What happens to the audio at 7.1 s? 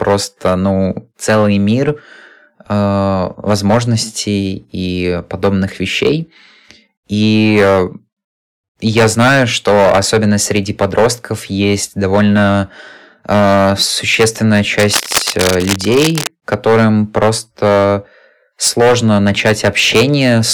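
At 7.1 s the speech has a harsh, gritty fuzz on its louder moments, and the same distortion runs through the whole clip rather than appearing only there. This is hard clipping. The signal is driven about 14 dB past what the stage can pass, so the peaks are sliced flat. Around one sample in twenty is cut off this way, and those squared tops add high harmonics that sound like crackle and fuzz.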